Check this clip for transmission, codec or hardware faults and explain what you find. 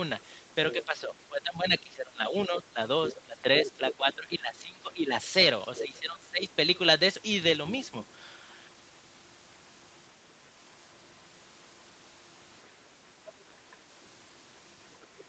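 Two related echo-control problems run through the first six and a half seconds of this speech recording.

Other side's voice leaking through, at 0.2 to 0.85 s, 3.1 to 3.95 s and 5.76 to 5.8 s: the far end was most likely playing from a loudspeaker into this microphone, and the echo canceller left part of it behind. A second voice sits underneath the talker, roughly 15 dB down in the first two stretches and about 10 dB down in the brief third one.

Speech suppressed in double talk, at 0.75 to 5.13 s and 5.8 to 6.5 s: with both sides talking at once, the echo canceller likely could not tell the local talker from the returning echo and attenuated everything. Within the first span about three seconds are affected in total, and the second span is dipped for nearly its full length. The talker's level sinks by up to about 15 dB, making the voice fade and duck.

Through all of this, the Opus call path and microphone processing keep the audio band-limited to 8 kHz.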